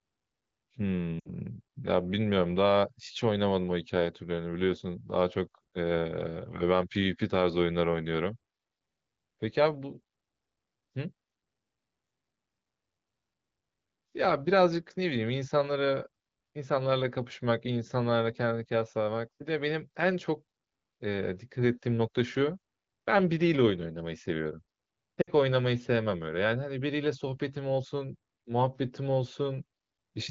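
Speech with two brief smeared, fading dropouts near 1.19 s and 25.22 s, each about 60 ms, fitting three lost AMR speech frames the wideband decoder concealed by repeating prior settings.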